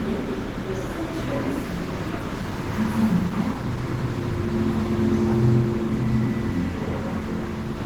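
An everyday-sound recording carries plainly audible Opus compression throughout, likely from low-bitrate encoding that fits about 16 kbps in hybrid mode: textures turn hoarse, grainy and rough. A spectrogram shows smeared, noise-filled bands reaching only to 20.1 kHz.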